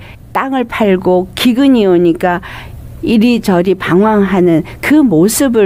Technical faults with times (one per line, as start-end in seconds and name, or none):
none